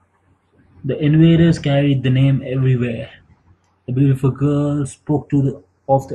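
Throughout, channels drifting apart: separate clocks about 50 ppm off slide the delay to roughly 0.15 ms, giving a slow flange in mono.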